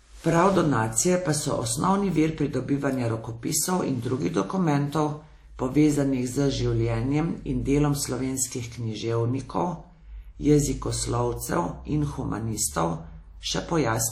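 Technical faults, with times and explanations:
Throughout, WMA compression, likely at about 48 kbps: washy, ringing hiss breathing with the speech; spectrogram cut off at 17.3 kHz, with blotchy, smeared highs.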